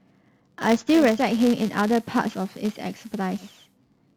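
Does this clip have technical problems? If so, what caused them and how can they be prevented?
Yes. A filter restarted on every block runs through the whole clip. The filter loses its memory at each block boundary and restarts from silence, so every block opens with a tiny transient. Here those transients repeat at 188 Hz, which fits a 256-sample block. The result is a steady buzz under the speech that grows and shrinks with its level. Carrying the filter state across blocks prevents it.

From 0.92 s to 3.79 s there is digital radio blending to analogue. The receiver lost its digital stream and cross-faded to the FM broadcast of the same station, then faded back. Each cross-fade takes 417 ms. On the FM side the level drops about 2 dB, and hiss sits roughly 35 dB below the speech. Better reception, or recording from a stable digital source, prevents it.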